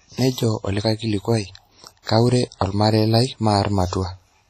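WMA compression runs through the whole speech clip: the sound is washy and ringing, with hiss that swells and fades with the signal and nothing above 13.3 kHz. This is likely a transform codec at heavy settings, consistent with roughly 32 kbps, zeroing weak detail.

Pre-echo appears from 2.02 to 2.07 s, where a short hiss smears about 46 ms ahead of a sharp attack. The codec spread noise sized for the loud onset across its whole block, filling the quiet gap before it and softening the attack.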